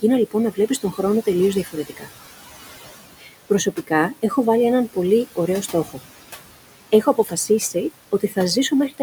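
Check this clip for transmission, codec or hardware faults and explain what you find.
Two faults are audible, both coming from a noise suppressor.

Noise suppressor artifacts run throughout. Room noise sitting about 15 dB below the speech is pulled down by about 16 dB in gaps. A spectrogram shows mottled, flickering background patches.

Speech cut by the noise suppressor occurs at 0.52–0.99 s after "λοιπόν να", 1.64–2.11 s, 3.19–3.30 s, 3.49–3.91 s before "έχω βάλει έναν πολύ", 5.36–6.01 s after it, 6.92–7.75 s and 8.12–8.37 s. Quiet speech taken for noise is dropped about 10 to 16 dB, so brief sounds seem swallowed. The waveform shows short envelope dips, and the spectrogram shows faded consonant energy.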